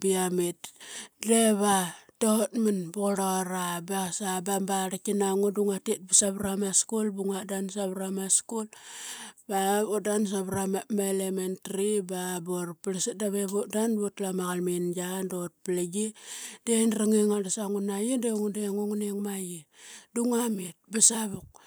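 At 6.14–6.20 s and 21.02–21.08 s, the speech peaks flatten into a harsh crackle, likely microphone overload driving them about 5 and 6 dB past the converter's limit.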